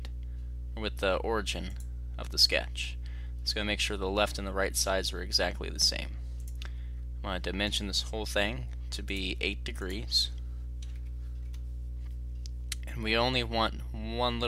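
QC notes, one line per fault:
No technical faults were found anywhere in the audio. Nothing in the sound calls for any note.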